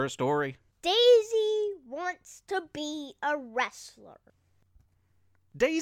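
No technical faults are audible.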